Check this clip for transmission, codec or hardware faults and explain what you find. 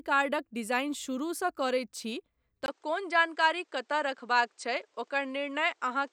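One fault is present. Input switched to a poorer device at 2.66 s, likely another microphone: after a 20 ms gap, nothing above 9.2 kHz remains, and faint new background noise appears.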